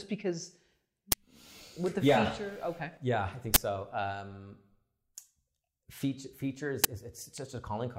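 Uninitialised buffer bursts at 1.12 s, 3.54–3.56 s and 6.84 s: stale memory played as samples, giving loud digital noise bursts, fitting 512- and 1024-sample buffers.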